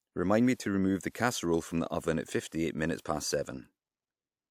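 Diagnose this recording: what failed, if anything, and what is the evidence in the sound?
The codec stage failed, producing pre-echo. A brief hiss precedes sharp onsets at 0.54–0.60 s before "remove the", at 1.10–1.15 s between "remove the" and "from the oven at", and at 3.01–3.05 s. Transform-block quantisation noise spreads 46–55 ms into the quiet lead-ins.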